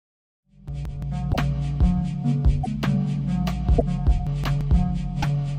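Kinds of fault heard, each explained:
Chunks out of order: A jumbled moment at 0.68 to 1.02 s and again at 4.27 to 4.61 s. Two 170.67 ms blocks play swapped, the later one arriving one chunk early, so nothing is lost but three hard joins appear.
Broken MP3 bit reservoir: Brief chirps or noise bursts with a skip forward, each around 30 to 45 ms, at 1.32, 2.63, 3.78 and 5.21 s. The likely cause is cut MP3 frames, roughly 26 ms long, whose successors borrow bits from the wrong data.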